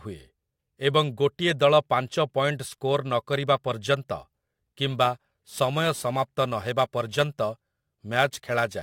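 From 4.90 s to the end, crude rate conversion, which fits a 44.1 kHz to 48 kHz change by repeating samples, adds an inharmonic fizz about 25 dB down that tracks loud, bright speech, unlike steady hiss.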